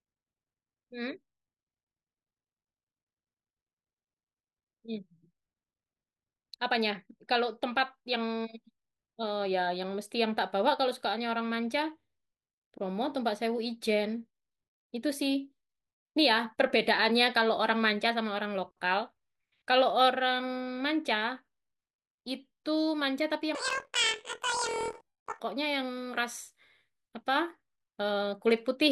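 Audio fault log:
23.55–25.41 s, planar audio read as interleaved: each 24 ms block stores all its left samples followed by all its right samples, but the player takes them as alternating left-right pairs. Each channel therefore receives a whole block of one side packed into half the block's time, played at double speed and then repeated with the other side. The speech jumps an octave (12 semitones) while keeping its pace, with a rough flutter at the 41.7 Hz block rate.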